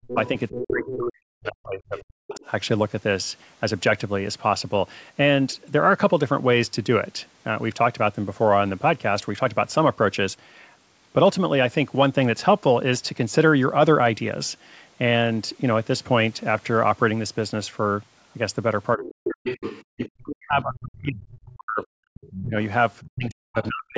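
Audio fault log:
0.06–2.45 s and 18.96 s to the end, speech suppressed in double talk: the talker keeps dipping and breaking up in chunks, down by about 40 dB at the worst points, for roughly two seconds in the first stretch and three in the last. Another voice is running underneath at the same time, so this is likely the echo canceller failing to separate the talker from the loudspeaker echo and turning both down.
0.07–0.96 s, 1.98–2.39 s, 19.45–20.09 s and 22.14–23.67 s, other side's voice leaking through: a second voice sits under the talker in these patches. It's fairly strong at the start and around 19.5 s, roughly 10 dB below the speech, quieter near the end, and only a faint trace around 2 s. That's likely far-end audio from the loudspeaker that the echo canceller didn't fully strip out of the mic signal. The whole clip also has nothing above 8 kHz, which is just the call band.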